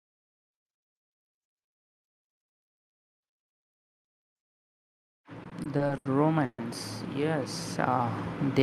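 From 5.43 to 6.08 s, packets reached the jitter buffer more slowly than they were played, so it kept running dry. These repeated stalls (stutter) are six short gaps patched with continued sound, up to 80 ms each and about 180 ms in all. The speech drags and stutters with nothing lost.

From 6.45 to 6.61 s comes a call audio freeze, likely caused by packets being held up long enough to empty the buffer again. The last sound carries on for about 130 ms, fading to roughly 50 ms of silence, before speech resumes where it stopped. The Opus call path's band limit near 12 kHz fits a 40 kbps stream.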